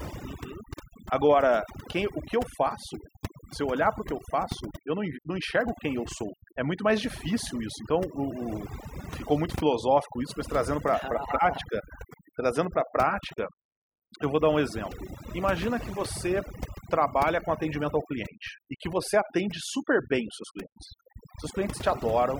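Throughout the speech, the background drops to near silence dotted with twinkling specks. That is overdone noise removal: a noise reducer set too hard is pulling individual frequency bands down wherever they sit close to its noise estimate, taking quiet vocal detail with them.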